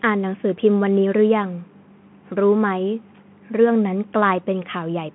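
Across the whole clip the speech sounds boxed-in and thin, with nothing above about 3.8 kHz. The s sounds turn scratchy and a fine granular hiss sits beneath every phrase. This is the Bluetooth CVSD headset codec. It encodes the signal one bit at a time, nudging a step up or down, so fast high-frequency detail outruns the step and breaks up. The damage is plainly audible, and the 150 Hz to 3.4 kHz band fits a 64 kbps CVSD link.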